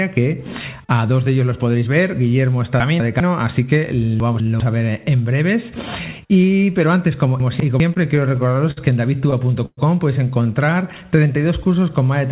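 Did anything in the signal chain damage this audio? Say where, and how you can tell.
Yes. At the network and jitter-buffer stage, a 200 ms chunk arrived late and was played one chunk after its successor, at 2.8 to 3.2 s, 4.2 to 4.6 s and 7.4 to 7.8 s. These are chunks out of order. Each swap leaves three hard joins, heard as a jumbled moment. Nothing goes missing.

Between 7.94 and 8.79 s the jitter buffer ran dry seven times. That is a run of repeated stalls, or stutter. Each time the receiver stretched the last sound to fill the gap, about 120 ms in all and never more than 56 ms at once. No audio is lost, but the passage drags and stutters.

At 9.66 to 9.79 s the call audio freezes for about 0.12 s. The last sound is held as a fading buzz that ends in about 40 ms of silence, then the audio resumes where it stopped. The likely cause is packets held up in the network. Throughout, the call path's G.711-style band limit means nothing is heard above 4 kHz.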